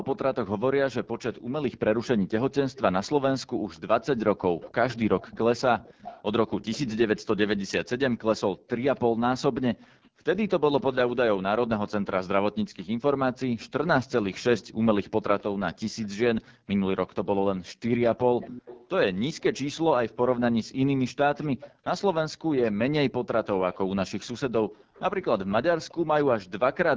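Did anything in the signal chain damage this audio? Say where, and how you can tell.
Yes. At the codec stage, AMR wideband (HD Voice) coding at 8.85 kbit/s, one of its lowest rates, makes the speech rough and raspy throughout.

In call processing, an echo leak, likely from a loudspeaker-side echo canceller, lets a faint copy of the speech return about 272 ms late. You can hear it at 0.16–6.94, 8.13–11.1, 12.77–17.46, 18.39–19.43, 21.42–23.78 and 24.78–25.94 s, and it is clearest around 18.4 s.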